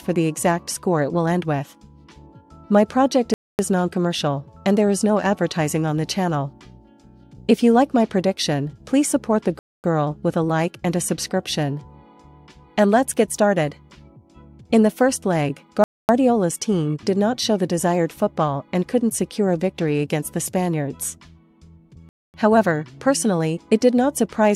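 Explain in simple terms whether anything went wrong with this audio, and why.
Yes, something went wrong: there's a gap between chunks. The sound drops into silence for a quarter of a second at 3.34, 9.59, 15.84 and 22.09 seconds, then picks up again. Nothing gets lost, but the audio came through in 6-second pieces and each join leaves a short hole.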